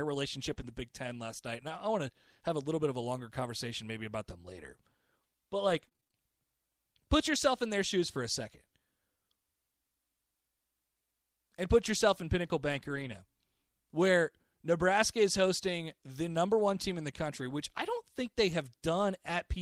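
At 0.53 s the speech gives a brief smear lasting about 0.04 s, a short concealed packet loss. Roughly 20 ms of audio arrived too late to decode, and the receiver bridged the hole by extending the preceding sound before blending back into the real signal.

Right after, from 0.57 to 0.71 s, the speech turns rougher and noisier without any gap. This is a lost packet rebuilt from error correction. Each missing packet was replaced by a low-bitrate copy carried in the following one, about 80 ms in all, consistent with four lost packets.

From 5.69 to 6.16 s the sound goes choppy, the robotic sound of repeated packet loss. Eight separate holes, the longest 27 ms, were each patched by continuing the last sound, with a new dropout following soon after. About a third of this span is concealed audio, and some of it was partly rebuilt.

From 12.72 to 13.14 s the rough, grainy texture returns with no break, again lost packets rebuilt from error correction. 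About 220 ms was played from low-bitrate backup copies, which points to around eleven lost packets.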